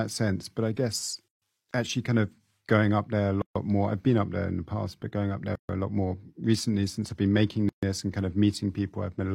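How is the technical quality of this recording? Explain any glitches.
The recording has one recurring fault. Separately encoded pieces were joined without trimming each encoder's start-up delay and final-frame padding. This leaves a gap at a join of encoded pieces every 2 s: a gap of about 140 ms, after which the speech carries on from where it stopped. The gaps occur at 1.28 s, at 3.42 s after "going up there a", at 5.55 s after "past but going up", and at 7.69 s after "since I've been making".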